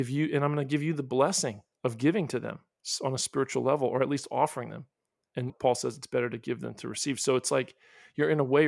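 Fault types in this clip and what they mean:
No technical fault can be heard anywhere in the speech signal.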